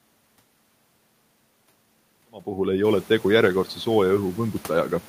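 No system faults: the level eases up from around 2 s to full at 2.9 s with no edge or click, and the room's own background comes up by about 17 dB near 3 s but stays about 27 dB beneath the speech.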